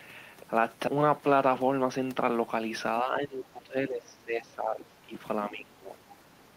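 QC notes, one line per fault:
0.87 s, skip ahead: roughly 0.7 s of speech is dropped and playback jumps straight forward with no gap, so the two sides join abruptly.
0.97–2.32 s, jitter buffer speed-up: an overfull buffer drains by trimming short pitch-period pieces, removing around 150 ms. Speech runs about 9% faster at unchanged pitch and sounds hurried.
3.02–5.14 s and 5.49–5.97 s, speech suppressed in double talk: the speech dips by up to about 15 dB, likely the echo canceller attenuating the talker while the far side also speaks.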